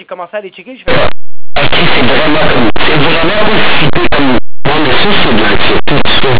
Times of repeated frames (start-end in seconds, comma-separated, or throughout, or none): none